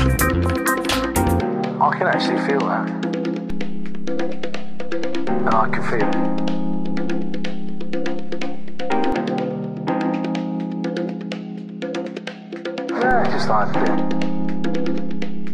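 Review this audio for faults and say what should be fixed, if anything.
DC step at 3.50 s, stepping back at 9.12 s, and again at 13.11 s, holding to the end. Each time the waveform's zero line jumps by about -18 dBFS, heard as a low thump at every transition while the sound itself carries on unchanged. To prevent it, block DC ahead of the converter with a high-pass filter and keep offset-bearing inputs from being switched into the live path.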